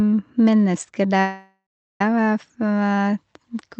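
From 1.20 s to 2.01 s the speech stalls: the last sound is stretched into a fading buzz that dies away, leaving about 0.36 s of near silence, before the talker picks up exactly where they left off with nothing lost. This is a call audio freeze. The likely cause is packets held up in transit, so the jitter buffer ran dry and the receiver filled the wait, pushing everything after it about 0.8 s later. Through the call path, the sound stops near 8 kHz, which fits an Opus codec.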